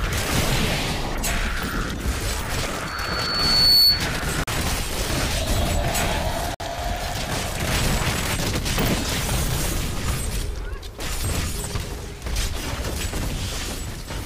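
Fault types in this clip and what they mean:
Loudspeaker feedback squeal: a piercing tone near 4.4 kHz swells over roughly a second from 2.87 s, ending about 10 dB above the rest of the sound at 4.08 s. A microphone is hearing its own loudspeaker, and at that pitch the loop gain exceeds one.
Bluetooth stall: the sound drops to silence for 39 ms at 4.44 s and for 55 ms at 6.55 s, then carries on. These short gaps are likely the headphones' buffer running dry while interference held up packets, with playback waiting for resent data.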